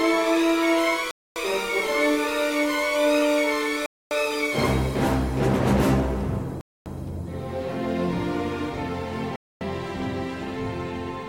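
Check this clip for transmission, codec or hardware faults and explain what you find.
There is one fault: gaps between chunks. Silences of 250 ms fall at 1.11, 3.86, 6.61 and 9.36 s. The audio arrives in 2.5 s chunks, and each join gets dead air. Nothing is lost. The sound just stops abruptly, then resumes.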